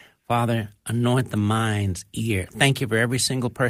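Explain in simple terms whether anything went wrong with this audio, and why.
A few packets of this speech were lost in transit, around 60 ms' worth, which points to about three. Each was a lost packet rebuilt from error correction: the next packet carried a rough backup copy. So from 1.27 to 1.37 s nothing goes silent, but the sound turns briefly grainier and noisier.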